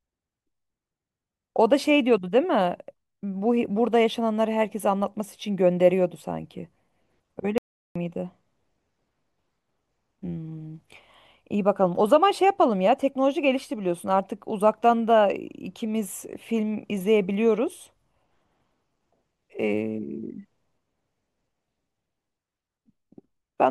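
At 7.58 s the speech cuts out mid-flow and the output stays silent for about 375 ms, resuming at 7.96 s. This is a playback stall, likely the player running short of buffered data or its output thread being briefly blocked before recovering.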